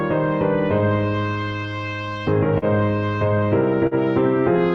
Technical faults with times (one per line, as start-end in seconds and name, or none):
0.00-4.74 clock drift between sender and receiver
0.81-3.44 repeated timing corrections
2.58-2.65 short stall from a late packet
3.87-3.94 short stall from a late packet